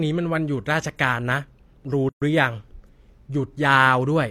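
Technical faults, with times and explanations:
2.09 to 2.22 s, gap at a join of encoded pieces: the speech drops out for about 127 ms and then resumes exactly where it stopped. Two separately encoded segments were joined without trimming, so the end of one segment carries its last-frame padding and the start of the next carries the encoder's leading delay. On a waveform this appears as a flat stretch with steep, slightly blurred edges. A spectrogram shows a clean vertical band of silence across all frequencies.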